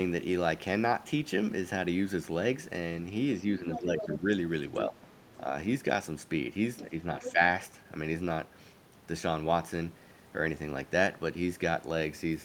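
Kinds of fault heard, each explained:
Speech suppressed in double talk: the talker's level dips while the far side is also active, likely because the echo canceller, unable to separate the two, turned both down. The dips fall at 3.58–4.27 s (up to about 10 dB), 4.87–4.96 s and 6.9–7.39 s (about 5 dB).
Other side's voice leaking through: a second voice, likely loudspeaker playback the echo canceller did not fully remove, is audible under the talker at 3.71–4.05 s, 4.78–5.37 s and 7.19–7.32 s, about 10 dB below the speech, with a faint scrap near 6.8 s about 20 dB down.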